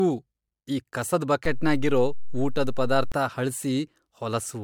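Generation loss runs throughout this speech clip, which sounds swirly, hollow and smeared, with blurred attacks. The likely cause is repeated MP3 encoding, around three passes near 104 kbit/s, with nothing above 19.9 kHz. A DC step at 1.45 s jumps the waveform's zero line with a low thump. The offset lasts until 3.12 s, while the speech carries on unchanged.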